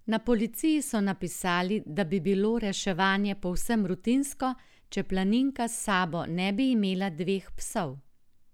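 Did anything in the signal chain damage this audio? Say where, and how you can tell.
No, nothing in the chain audibly damaged this recording.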